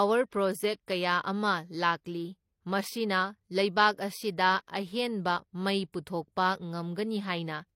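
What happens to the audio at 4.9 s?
Transcoding between lossy codecs colours 4.9 s, as it does the whole clip: nothing sounds above 16.3 kHz, and artefacts from two stages overlap. This likely comes from a low-rate MP3 pass re-encoded as HE-AAC, the second codec wasting bits re-encoding the first codec's damage.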